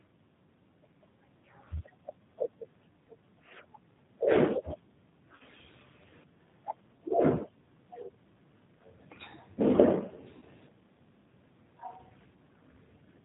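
Right from the start the whole thing runs through what sounds like the G.729 codec at around 8 kbit/s, and the damage is easy to hear. The codec rebuilds the voice from a vocal tract filter, a pitch predictor and a few pulses per frame, and it throws away everything above 4 kHz. So you get a band-limited, slightly rough, synthetic-sounding voice for the full length of the speech.

Then there are two spots of VoIP packet loss concealed by the speech codec. The first runs from 5.36 to 5.43 s, about 40 ms of missing audio, which fits four lost 10 ms frames. The second runs from 10.37 to 10.44 s, about 50 ms, which fits five lost frames. In each gap the decoder keeps extrapolating from the last pitch and filter it had while turning the gain down. You hear the sound smear into a brief buzzy tone or coloured noise that fades. Because every frame builds on the one before, the voice stays weak or distorted for a short while after the packets come back.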